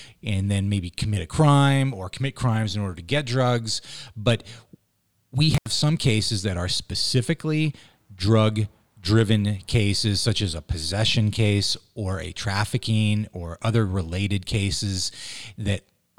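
A loose cable or plug briefly opened in this speech recording, an intermittent contact, dropping the signal for about 76 ms between 5.54 and 5.67 s, with crackle at the edges, just before "some cases that are".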